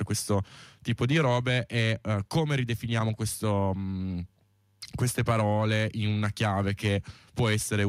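The speech recording has no technical faults in its signal path.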